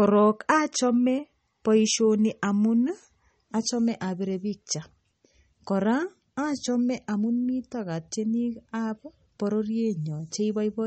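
From start to finish the speech sounds watery and swirly, with plainly audible damage: s sounds turn metallic and chirpy, onsets smear, and nothing survives above 8.4 kHz, so the top end is dull and clipped off flat. That pattern is likely MP3 compression, with the encoder starved of bits, which fits a low bitrate around 32 kbps. It discards the treble entirely and drops weak frequency detail that flickers in and out between frames.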